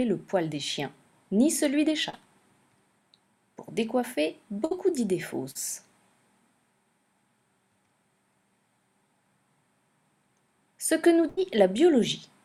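Short concealed packet loss occurs at 2.09 to 2.15 s and 5.51 to 5.57 s. Each time about 40 ms of the stream arrived too late, and the receiver bridged the hole by extending the preceding sound, heard as a brief smear or wobble. A burst of packet loss hits at 4.65 to 4.73 s and 11.29 to 11.39 s, dropping about 60 ms and then 80 ms in a row. The receiver stretched the last sound into a fading buzz or hiss before the audio picks up further on, the span between gone.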